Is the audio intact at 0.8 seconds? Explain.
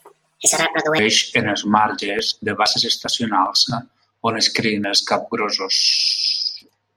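No. At 0.8 seconds the speech sits inside a section at the wrong speed, from 0 to 0.99 s. It plays 1.52 times too fast, likely from fitting it to the wrong clock. Pitch rises about seven semitones, so it sounds high and hurried.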